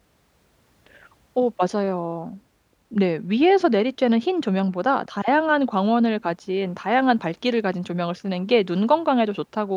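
Nothing in the speech recording stood out as a technical problem on listening.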